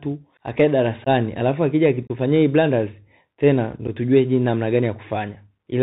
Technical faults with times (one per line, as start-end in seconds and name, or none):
0.00-5.82 Bluetooth CVSD headset codec
1.04-1.08 unconcealed Bluetooth headset packet loss
2.07-2.11 unconcealed Bluetooth headset packet loss
3.87 unconcealed Bluetooth headset packet loss